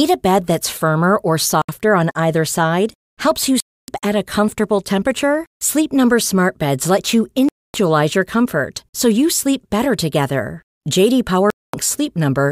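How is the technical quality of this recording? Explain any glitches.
The speech is broken by four abrupt silences. Bluetooth dropouts at 1.62 to 1.69 s, 3.60 to 3.88 s, 7.49 to 7.74 s and 11.50 to 11.74 s, lasting about 70, 280, 255 and 230 ms, are likely packets arriving too late and being discarded. Sound cuts out sharply, then resumes further along, as though it kept playing.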